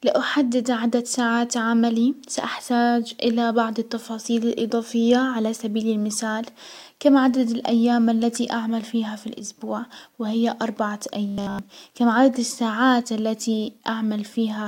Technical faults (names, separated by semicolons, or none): robotic sound from repeated short buffers